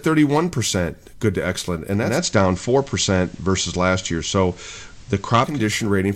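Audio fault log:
1.95–5.67 s, digital radio blending to analogue: losing digital, the receiver cross-fades over 306 ms to FM, adding faint hiss, shifting level about 2 dB.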